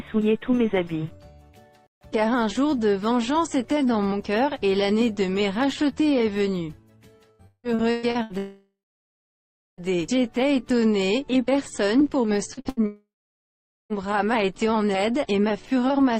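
The audio breaks up under network loss in two places. From 7.31 to 8.33 s there is repeated packet loss with a robotic sound: six gaps, the longest 166 ms, with about half of that span filled by the receiver extending the previous sound. The result is choppy. Immediately after, from 8.38 to 9.81 s, comes a long network dropout lasting about 1.4 s. The last sound is stretched into a fading buzz or hiss, and roughly 1.0 s of silence follows before the audio resumes with that section missing. A second long dropout of the same character runs from 12.86 to 13.93 s, covering about 1.04 s with roughly 0.81 s of silence. Both are likely caused by the network delivering no packets for the whole interval. Just before that second dropout there are two instances of short concealed packet loss, at 12.54 to 12.60 s and 12.61 to 12.68 s, each about 40 ms. They sound like brief smears where the decoder extrapolated from the preceding sound and then crossfaded back. 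These lead straight into a burst of packet loss from 12.69 to 12.80 s, where 80 ms went missing and the concealment fades out.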